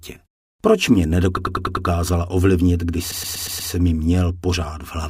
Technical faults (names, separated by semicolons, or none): repeated frames